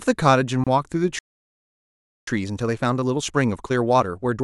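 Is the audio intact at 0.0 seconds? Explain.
Yes, the audio is intact at 0.0 seconds, with no technical fault at that moment.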